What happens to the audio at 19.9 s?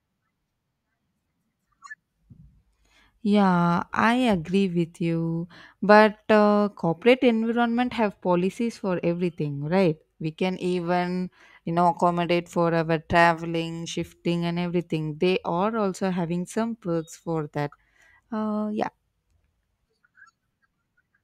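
At 19.9 s the speech carries on cleanly, with no dropout, click, distortion or other fault at that moment.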